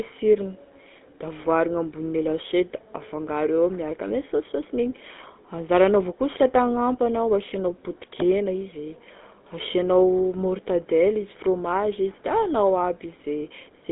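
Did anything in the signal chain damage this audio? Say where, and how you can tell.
Yes, at the codec stage: GSM full-rate coding throughout, with a gravelly buzz from pulse-driven excitation and nothing above 3.8 kHz, which fits a 13 kbps phone link.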